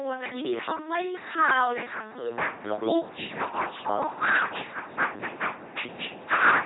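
Throughout the speech, the signal has been pushed through an LPC-10 vocoder, which keeps no waveform at all, only a ten-pole model of the vocal tract excited by either a pulse train or noise, a heavy reduction consistent with roughly 2.4 kbit/s. Each instant is forced to be fully voiced or fully unvoiced, so the speech comes out as a buzzing, mechanical robot voice, with stray buzz or hiss where that choice goes wrong, and nothing survives above 3.9 kHz.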